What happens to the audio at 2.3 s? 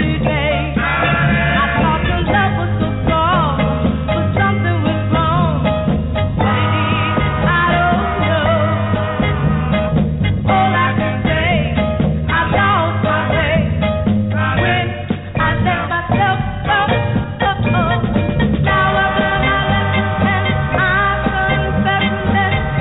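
Nothing goes wrong at 2.3 s: the audio there is intact, carried through the call path with its narrowband character, nothing above 4 kHz.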